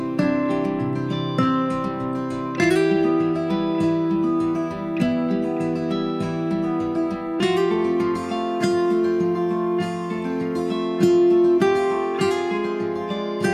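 No technical faults can be heard anywhere in the audio, and the signal stays steady and continuous throughout.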